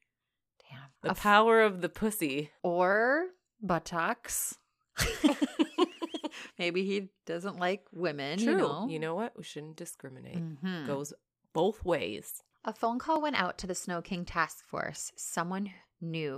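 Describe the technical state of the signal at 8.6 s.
At 8.6 s the speech signal is intact, with no dropout, distortion or other technical fault to be heard.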